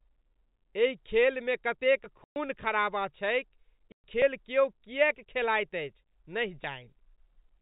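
Telephone-band speech carries three small forward jumps in the sound at 2.04, 4.22 and 6.64 s, the first right after "एहि खेलमे कतेक". These are likely dropped buffers (overrun): the program failed to read its samples in time, so around 20 ms was overwritten and the two sides were spliced together without any gap. There are also two hard-edged holes of dead silence, from 2.24 to 2.36 s, again shortly after "एहि खेलमे कतेक", and from 3.92 to 4.04 s. Each lasts 120 ms. This is packet loss filled with silence: the receiver inserted silence where packets never arrived, and the length fits six 20 ms packets per hole.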